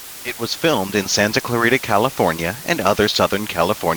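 From start to finish, the speech carries low bit depth with dither: a steady, even hiss sits roughly 15 dB below the voice, which fits about 6 bits. Dither turns the rounding error into constant noise, so unlike undithered quantization there is no gritty distortion following the speech.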